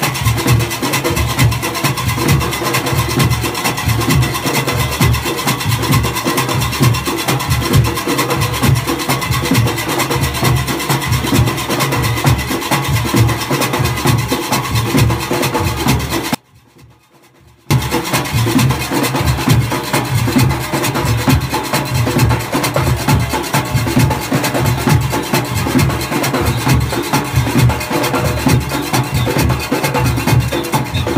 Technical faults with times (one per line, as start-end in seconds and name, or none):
16.35-17.71 audio dropout to a faint residue